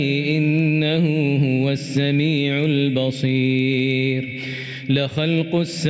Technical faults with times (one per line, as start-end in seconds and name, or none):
0.00-5.90 gain pumping